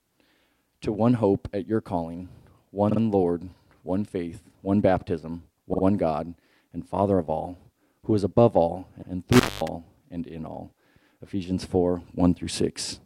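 At 2.89 s and again at 5.73 s you get repeated frames: a 48 ms block plays twice more, so there's a quick stutter. At 9.01 s a 96 ms block repeats once, same mechanism. Right after, from 9.33 to 9.68 s, an intermittent contact opens for about 0.22 s, crackling at the edges, with faint hiss in the gap.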